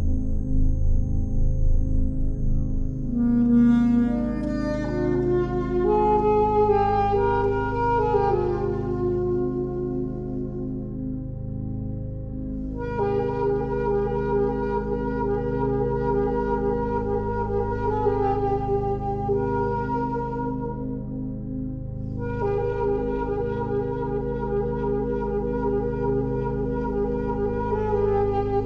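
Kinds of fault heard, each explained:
No technical faults can be heard anywhere in this audio.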